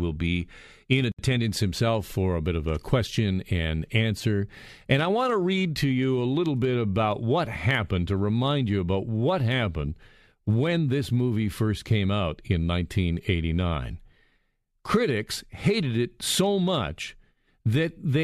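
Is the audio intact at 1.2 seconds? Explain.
No, not quite. Just before that point, from 1.12 to 1.19 s, there is a gap at a join of encoded pieces: a gap of about 68 ms cutting into continuous speech. The pieces were encoded separately and joined untrimmed, so one piece's end-frame padding and the next one's encoder start-up delay both remain as dead air. The codec smears the edges, so the truly silent part is shorter than the full gap, and the speech resumes where it stopped, right around 1.2 s.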